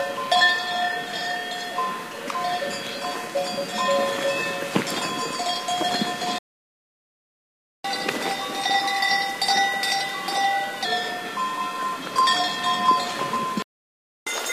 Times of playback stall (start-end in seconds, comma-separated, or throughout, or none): 6.38-7.84, 13.62-14.27